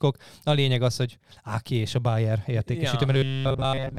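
From 3.13 s to the end of the speech at 3.98 s, the voice becomes a rigid, metallic buzz pitched at 134 Hz, still loosely following the words. This is robotic sound from repeated short buffers, likely caused by audio arriving too seldom, so roughly 7.5 ms chunks are replayed for most of that stretch while real audio is skipped.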